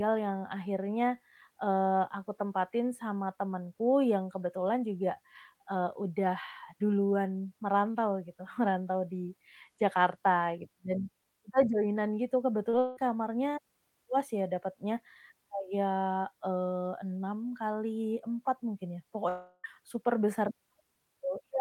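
Speech, with two kinds of network fault. The first is short concealed packet loss at 12.69 to 12.75 s, right after "joinan gitu". About 40 ms of audio failed to reach the decoder in time. The receiver bridged roughly 34 ms of that by extending the preceding sound, then blended back into the real signal. The result is a brief smear in the speech rather than a clean cut. Almost immediately after, from 12.79 to 12.99 s, the sound turns into a synthetic continuation lasting about 177 ms that fades without reaching silence, with about 180 ms of real audio gone. A longer instance runs from 19.29 to 19.66 s. There, about 352 ms of continuation decays into roughly 30 ms of silence before normal audio resumes, with about 360 ms lost. Both are likely long network dropouts, where no packets arrived for a stretch and the concealer kept the last sound going until it ran out.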